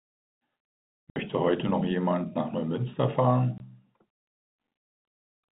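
Speech, carried over a G.711 telephone path that cuts everything above 4 kHz, is broken twice by packet loss filled with silence. A 60 ms hole opens at 1.10 s, and a 20 ms hole follows at 3.58 s. The lengths fit three lost 20 ms packets and one. The receiver played nothing in their place. So the sound drops out abruptly, with hard edges.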